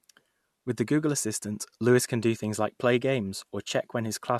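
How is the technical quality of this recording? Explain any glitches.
Nothing in this speech recording comes across as a glitch, so there's really nothing here that needs explaining.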